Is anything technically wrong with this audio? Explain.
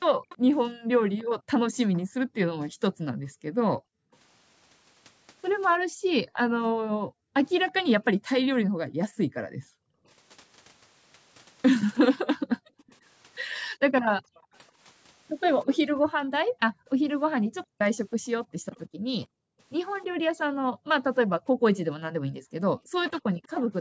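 Yes, there are two problems: the background is gated by the echo canceller, and there is echo leak.

From 0.28 s to 23.72 s, the room sound keeps sinking and coming back, dropping by as much as about 40 dB and adding up to roughly ten seconds of gaps. The background gated by the echo canceller causes this. Whenever the loudspeaker side was active, the canceller clamped down on the microphone hard enough to suppress the ambience along with the echo, then released it.

A faint delayed copy of the speech trails about 325 ms behind at 0.29 to 4.16 s, 12.78 to 14.58 s, 18.11 to 18.8 s and 23.43 to 23.48 s. It sits roughly 20 dB below the speech in the first stretch and closer to 30 to 35 dB down in the later ones. This is likely echo leak: the far end's echo canceller didn't fully remove the loudspeaker sound its microphone picked up, so some of it was sent back.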